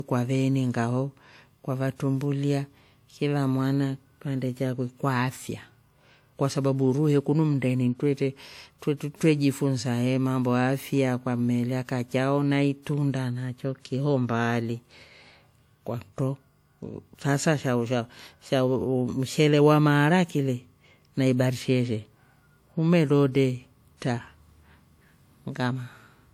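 Speech, likely encoded first at a low bitrate and then saved again as a high-bitrate MP3: low-bitrate audio saved at a high bitrate. The larger second file cannot restore what the first pass removed, so that loss persists throughout, with nothing above 20.1 kHz.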